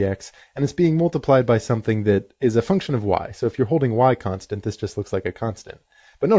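No technical faults are audible.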